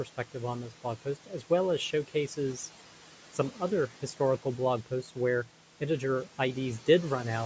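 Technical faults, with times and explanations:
Throughout, noise suppressor artifacts: the steady room noise, sitting about 17 dB under the speech, gets pulled down by about 12 dB whenever nobody's talking, then comes back up under the voice. The suppressor decides band by band, frame by frame, what counts as noise. The call microphone chain is doing its usual thing too, with nothing above 8 kHz.
1.02 to 1.51 s, speech cut by the noise suppressor: just before "well as", a bit of speech totalling roughly 150 ms dips by up to about 12 dB, the same amount the background gets knocked down. The suppressor read those soft bits as noise and turned them down along with it, so they come out swallowed and faint.
4.86 to 5.16 s, speech cut by the noise suppressor: between "historical blog" and "where integer", about a tenth of a second of quiet speech sinks by up to about 12 dB. Same story as before: low-level speech sat close enough to the noise floor that it was classed as background, and it ends up sounding swallowed and faint.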